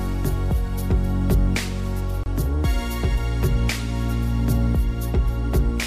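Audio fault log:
2.24–2.26 s, gap at a join of encoded pieces: a break of about 25 ms cuts into continuous sound, then the sound carries on where it stopped. Two separately encoded pieces were joined without trimming encoder delay and end padding. The waveform shows a brief collapse with softened edges; the spectrogram shows a narrow vertical blank band.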